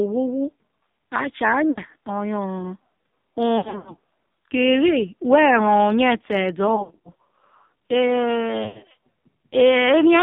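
AMR narrowband mobile codec, throughout the clip: the speech has been squeezed through a heavily compressed mobile speech codec that rebuilds the voice from a simple vocal-tract model fed by a few pulses. Nothing below about 150 Hz or above 3.7 kHz survives, so the sound is thin and boxed-in. The heavy buzzy, synthetic quality points to one of the lowest bitrate modes, which fits roughly 5.9 kbps.

Lost AMR speech frames, at 1.70 to 1.79 s, 3.58 to 3.94 s, 6.76 to 7.12 s and 8.64 to 8.83 s: frames corrupted on the radio link were replaced by the decoder, which kept repeating the last good pitch and vocal-tract settings at falling gain. The first event is a short smeared dip, about 60 ms, fitting three frames. The later three are scattered losses spread over 160 to 280 ms, with gaps of up to 80 ms that warble, stretch and fade before the voice returns rough.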